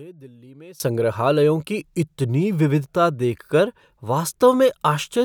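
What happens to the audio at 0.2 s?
At 0.2 s the speech has collapsed to a faint trace, about 22 dB down, from 0.0 to 0.8 s. The likely cause is one channel inverted: the shared centre content cancels when the channels sum. The waveform shrinks sharply, and the spectrogram shows the whole band nearly emptied.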